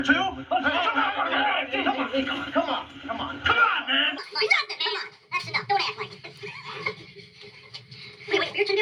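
From 4.18 s to the end, the sound jumps up about seven semitones and runs 1.5 times faster, pitch and tempo rising together. This is a wrong sample rate: the samples play unconverted at a higher rate, which fits 32 kHz material played at 48 kHz.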